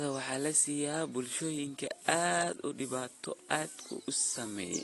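Throughout, the speech carries plainly audible AAC compression damage, likely from a low bitrate around 32 kbps. It sounds dull and warbly, and the spectrogram shows a hard ceiling near 11.6 kHz.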